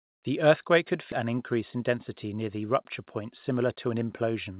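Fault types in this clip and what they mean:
Skip ahead: part of the speech stream was discarded while later audio was already queued, so playback jumps forward at about 1.12 s, dropping roughly 0.4 s of speech and splicing the two sides together with no gap or fill.
Jitter buffer speed-up: an over-full jitter buffer is drained by repeatedly cutting out short pitch-period segments. From 1.76 to 2.34 s and 3.20 to 3.95 s the speech runs about 8% fast at unchanged pitch, losing a few tens of milliseconds each time.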